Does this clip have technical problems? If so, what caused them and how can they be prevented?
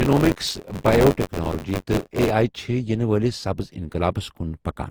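Yes. Throughout, the speech sounds swirly, hollow and smeared, with blurred attacks, likely generation loss from several passes through a lossy codec, consistent with Opus near 48 kbit/s. Prevention: keep a lossless master and encode only once.

From 0.00 to 2.31 s there is buffer tearing: a robotic 93.8 Hz buzz, which fits a 512-sample buffer, where about a fifth of each buffer repeats audio from roughly 20 ms earlier. Prevention: enlarge buffers or fix scheduling so writer and reader stay in step.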